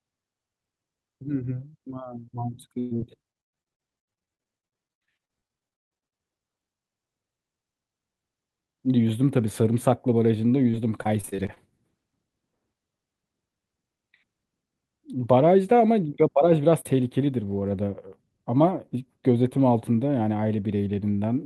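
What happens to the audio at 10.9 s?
At 10.9 s the speech falls inside a stretch of repeated packet loss (robotic sound), from 10.71 to 11.58 s. Short holes, the longest about 29 ms, are patched by stretching the preceding sound. About a fifth of the span is filled this way, so the speech turns choppy with pieces missing rather than dropping to silence the way a single clean dropout would.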